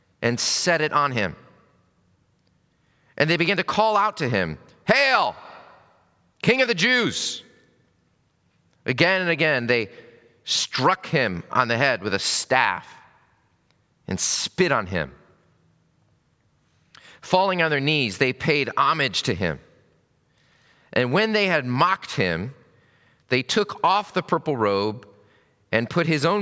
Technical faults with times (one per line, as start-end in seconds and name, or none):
none